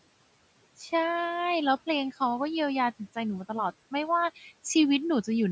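At 4.36 to 4.46 s you get speech cut by the noise suppressor: it mistook a brief stretch of speech for background, with room noise sitting about 22 dB under it, and pulled it down by about 8 dB for roughly a tenth of a second, so that bit sounds swallowed and faint.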